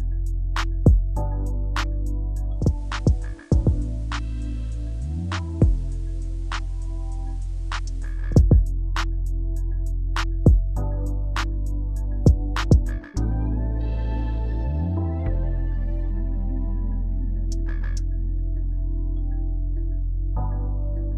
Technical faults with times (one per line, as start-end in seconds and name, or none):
2.51-8.37 digital radio blending to analogue